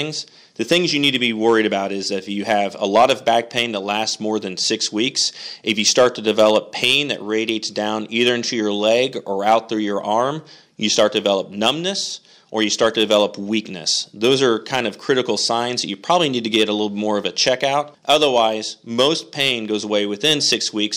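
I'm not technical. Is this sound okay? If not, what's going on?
No. Throughout the recording, the sound was fed in louder than one stage of the system could handle, so the very tops of its loudest moments were sliced off flat. This is hard clipping, heard as brief crackles on peaks, affecting only a tiny fraction of the sound.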